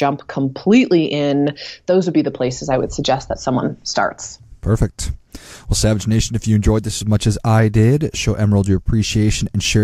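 No technical faults can be heard anywhere in the speech recording. There is nothing here that calls for a time or a value.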